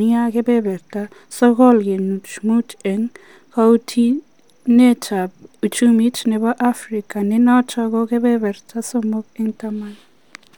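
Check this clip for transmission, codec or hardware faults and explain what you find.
Nothing in the transmission, coding or playback chain of this speech recording stands out as faulty, and the signal holds steady throughout.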